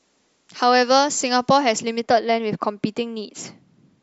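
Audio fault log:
0.0–2.0 s, pre-emphasis left on: the speech sounds thin, bright and hissy, with sibilants spitting forward. A 75 µs FM pre-emphasis treble boost was never reversed by its matching de-emphasis, leaving 10 kHz about 13 dB louder than 1 kHz.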